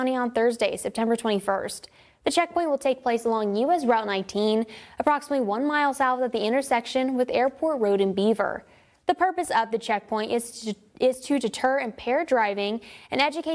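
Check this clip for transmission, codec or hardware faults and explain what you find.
Nothing in the clip points to a transmission, codec or hardware problem, so there's nothing here that needs chasing down.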